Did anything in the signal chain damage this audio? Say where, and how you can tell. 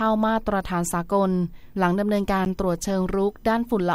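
Yes. At 2.45 s the speech drops into a block of digital silence about 10 ms long, most likely a driver or buffer underrun where the output wasn't filled in time. The waveform shows a near-flat line with abrupt edges, and the spectrogram shows a thin blank gap.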